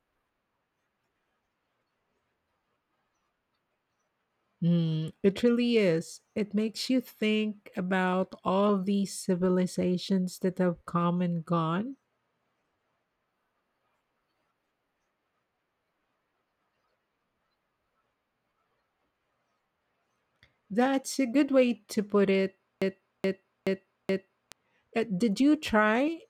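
A broken-record loop runs from 22.82 to 24.52 s in this speech recording, starting right after "way to put it": one 0.43 s fragment plays four times back to back, identical each pass, before the audio moves on. The likely cause is a stall in the player, encoder or stream that kept resending the last piece it held, so the 1.7 s of speech that belonged there is gone.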